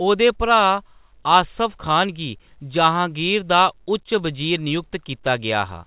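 No technical faults are present in the speech, which carries the narrow, sub-4 kHz band and faint level-following noise of G.711 telephone coding, consistent with the A-law variant at an 8 kHz sample rate working as intended.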